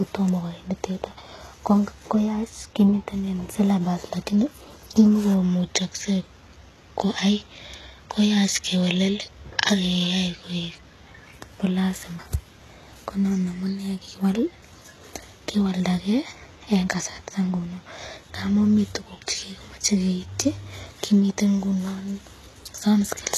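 From start to finish the speech carries heavy damage consistent with HE-AAC compression, likely HE-AAC v2 at a low rate that fits around 16 kbps. The upper spectrum is rebuilt from copied lower bands rather than coded, so sibilants sound gritty, lispy and metallic. On a spectrogram the treble shows repeated, smeared blocks of texture whose harmonics fail to line up with those below, and all energy stops dead at about 12.3 kHz.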